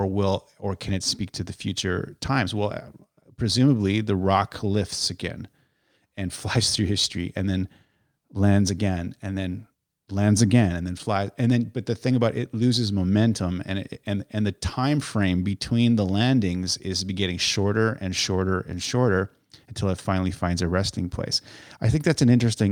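No technical fault can be heard anywhere in this speech recording, and the signal holds steady throughout without any audible disturbance.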